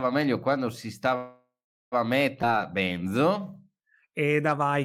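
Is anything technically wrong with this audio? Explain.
Yes, the clip has three faults.

From 1.15 to 1.94 s there is a call audio freeze. The speech stalls as the last sound is drawn out and fades, and then about 400 ms of silence shows as a flat waveform and a blank spectrogram. This likely came from an emptied jitter buffer, and the speech resumes with nothing lost.

From 2.42 to 2.45 s there is a skip ahead. Roughly a third of a second of speech is dropped and the two sides are spliced almost directly, which shows as an abrupt discontinuity in the spectrogram.

From 2.45 to 4.70 s there is a jitter buffer slow-down. Repeated pitch periods stretch the speech to 89% speed at unchanged pitch, adding 252 ms. On a spectrogram this looks like elongated, evenly repeated harmonic patterns.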